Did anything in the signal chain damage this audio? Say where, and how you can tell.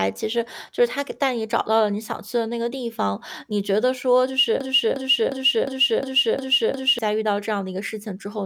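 Yes. A broken-record loop runs from 4.61 s to 6.99 s in this speech clip. A single fragment of about 0.36 s repeats back to back, seven times over, with identical content each pass, and the speech that should have filled those two and a half seconds never arrives. The likely cause is a stall at the buffer or playback stage: the player or stream stopped receiving fresh data and kept re-sending the last chunk it held.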